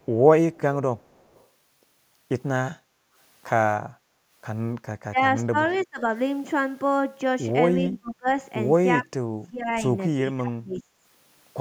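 A speech recording carrying three echo-canceller faults. An echo leak runs from 0.0 to 1.47 s, a very faint copy of the voice trailing 334 ms behind, and recurs more audibly but still faint from 5.7 to 5.86 s at a 355 ms delay; both likely come from a loudspeaker-side echo canceller letting part of its microphone pickup through. The background is gated by the echo canceller from 2.82 to 3.13 s and 3.94 to 4.3 s, the room sound dipping about 8 dB for a few tenths of a second while far-end playback is active, then recovering. Speech is suppressed in double talk at 5.03 to 6.02 s, 7.84 to 8.28 s and 9.02 to 10.82 s, the voice falling in deep, choppy drops, most severe in the last stretch, which is likely the canceller attenuating the near talker when both sides speak at once.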